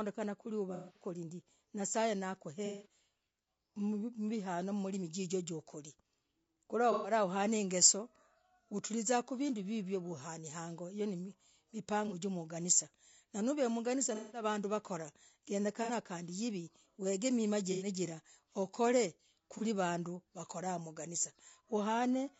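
A speech recording with rough, grainy voice quality throughout. Noise sits between the harmonics and the top band sounds thin and synthetic. The likely cause is low-delay AAC compression (AAC-ELD) at a low bitrate, which fits about 32 kbps. Its short frames cannot resolve pitch detail cleanly. AAC frame loss with concealment also breaks in at 0.74, 2.66, 6.92, 12.08, 14.15, 15.83, 17.72 and 19.58 s. Each break lasts 30 to 210 ms. The decoder patches each gap from the last good spectrum, leaving smeared, noisy or phasey fragments.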